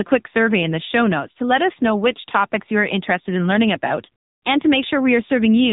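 Speech runs through an AMR narrowband mobile codec from start to finish. Nothing passes above about 3.8 kHz, so a spectrogram shows a hard, flat ceiling with empty space above it, and sibilants lose their bite. The codec damage is plainly audible: the vocal-tract model driven by sparse pulses gives the voice a buzzy, synthetic edge, which fits a low-rate mode around 7.95 kbps. In the waveform, transients look smoothed rather than crisp.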